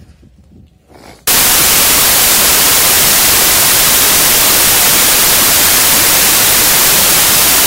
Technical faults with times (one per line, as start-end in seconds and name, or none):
1.27-7.67 samples built from the wrong bytes